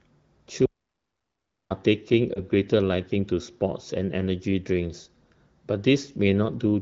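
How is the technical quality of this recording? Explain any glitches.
The recording has two audible glitches, heard through the light coding of an AMR wideband (HD Voice) codec at 15.85 kbit/s.

From 0.66 to 1.70 s the sound cuts out completely for just over a second, with no room tone at all, then resumes mid-flow. This audio dropout to silence likely comes from the input being lost while the recorder kept writing silence, so that second of speech is gone.

Between 2.33 and 2.40 s there is a brief dip or warble lasting about 20 ms. This is a lost AMR speech frame: the decoder replaced the missing frame by reusing the previous frame's pitch and vocal tract settings at reduced gain.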